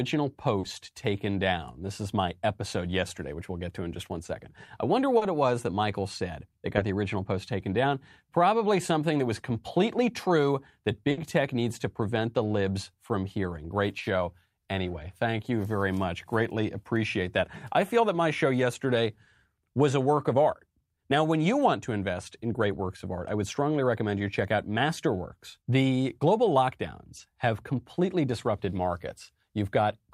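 Four times in this speech, a few hundredths of a second of the call arrived too late for the decoder, and the receiver filled each hole by extending the preceding sound before blending back in. This short concealed packet loss covers about 40 ms at 0.59 s, just before "taken down", and again at 5.17 s; about 20 ms at 6.77 s, between "said that" and "the original post taken"; and about 20 ms at 27.17 s. Each is heard as a brief smear or wobble.

At 11.11 to 11.19 s, between "was completely true that" and "tech needs to prevent", a burst of packet loss dropped about 60 ms in a row. The receiver carried the last sound forward and faded it over the gap, giving a short held buzz or fading hiss. The speech then resumes slightly further on, with that stretch gone.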